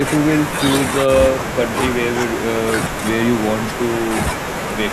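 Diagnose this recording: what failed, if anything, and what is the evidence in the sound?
Nothing failed in this recording, and there is no evidence of a fault anywhere in the sound.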